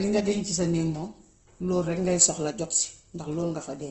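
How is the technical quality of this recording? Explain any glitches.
Quality is poor. Opus compression damage is plain throughout. The speech sounds rough and grainy, with nothing above 8.1 kHz. This likely comes from Opus at a low rate near 16 kbps.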